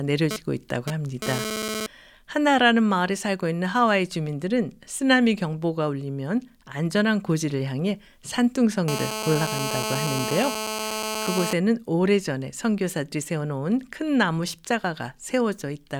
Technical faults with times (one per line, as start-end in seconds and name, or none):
0.31-1.86 GSM phone buzz
8.88-11.53 GSM phone buzz